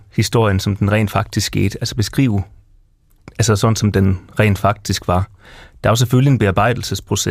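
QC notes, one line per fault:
No technical faults are audible anywhere in the speech recording.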